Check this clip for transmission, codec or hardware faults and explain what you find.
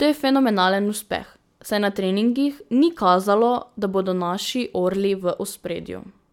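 Listening through the speech, nothing stood out as a fault of any kind.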